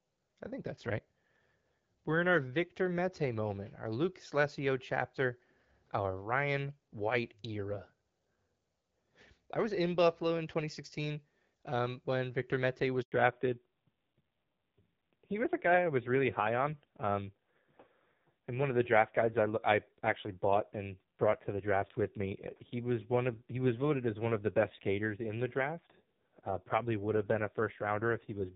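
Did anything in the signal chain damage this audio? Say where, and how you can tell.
Yes. At the network stage, a handover gap appears at 13.02 s: when the call moved from one network link to another, no speech frames arrived for 100 ms, until 13.12 s. You can hear the sound die away quickly into silence and then pick up again once the new link starts carrying frames. Whatever was said inside that window never reached the receiving end, so it is gone rather than merely muffled.

Right after the gap, from 13.12 s to the end, the codec stage shows a fallback to narrowband. The call left the AMR wideband (HD Voice) codec, whose 12.65 kbit/s coding sounds lightly coded before the switch, for a narrowband AMR codec at a low rate, about 5.9 kbit/s. Nothing above 4 kHz passes from that point, so the speech turns duller and rougher.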